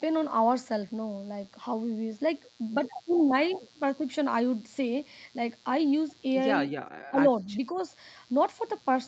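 A steady, raspy mains buzz runs under the speech for the whole clip, about 30 dB below it. Sharp switching spikes on a 60 Hz supply leaked into the signal, and their harmonics reach up through the 8 kHz band that the call path passes.

From 7.1 to 7.19 s, 7.37 to 7.5 s and 7.72 to 7.78 s, the speech dips briefly, by roughly 15 dB in the first dip and only a few decibels in the others. This is likely speech suppressed in double talk, with the echo canceller attenuating the talker while the far side spoke.

From 7.76 to 7.81 s, overlapping the last dip, a faint copy of the speech arrives about 204 ms late, roughly 35 dB down. This is an echo leak, likely from a loudspeaker at the far end whose echo canceller let a scrap of its microphone pickup through.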